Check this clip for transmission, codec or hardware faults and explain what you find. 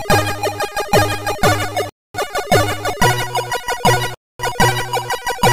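There are two gaps between chunks. Silent holes run from 1.89 to 2.14 s and from 4.14 to 4.39 s, each 250 ms long. Chunks appear to be 2.0 s long, and a quarter-second of silence is inserted at each join. Nothing is lost, but the sound is interrupted at each join.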